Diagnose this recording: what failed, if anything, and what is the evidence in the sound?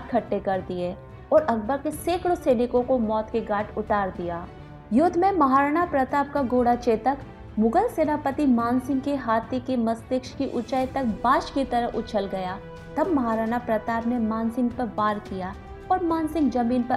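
Nothing in the recording points to a failure at any stage of the chain. No dropout, click, distortion or other defect can be heard anywhere in the sound.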